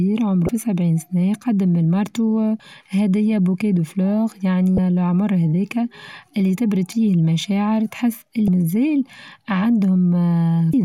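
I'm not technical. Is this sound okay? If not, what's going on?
No. There are five short blips, each about 30 ms, at 0.46, 2.57, 4.75, 8.45 and 10.71 seconds. The first comes just before "سبعين سنة قدم من". This is damaged data in a compressed stream. Some of the stored audio is corrupt, so the player briefly loses its place and glitches.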